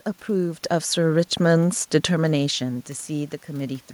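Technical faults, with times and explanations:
Nothing technical goes wrong here; the room noise in the background and the level shifts from the talker moving around half a second and again near two seconds are just part of the recording.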